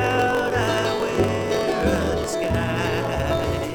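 The audio carries a block size mismatch (truncated) fault for its entire length: a steady buzz at about 45.9 Hz runs underneath it, and everything plays roughly 1.07 times too fast while staying at close to its original pitch. One stage in the chain writes longer blocks than the next stage reads, so the tail of every block is discarded. The discontinuity repeats at the block rate to form the buzz, which fits 1024-sample blocks being written.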